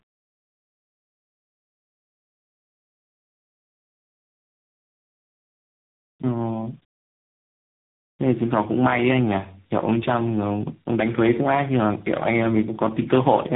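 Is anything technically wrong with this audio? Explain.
Yes. Throughout the clip the speech shows tandem speech coding: it has passed through three separate speech codecs in a row, consistent with a chain of G.726 at 24 kbit/s, G.711 A-law, G.726 again, and finally AMR-NB at 6.7 kbit/s. Each stage decoded the previous coder's already damaged output and re-encoded it, so the errors stack. The result is rough, muffled and warbly speech, with nothing above about 3.8 kHz.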